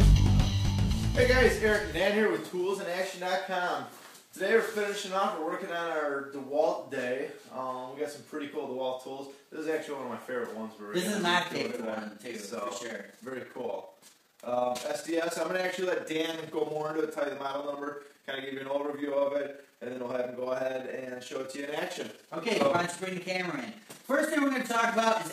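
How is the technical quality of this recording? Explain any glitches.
The recording has one clear fault, and it lasts from 11.38 s to the end. From that point there is overlap-add ripple. The sound was split into windowed frames and rejoined with an overlap that fails to sum to a steady gain. The level therefore dips and recovers once per frame, by about 6 dB, around twenty times a second. The result is a fast, rough flutter, like a tremolo over everything.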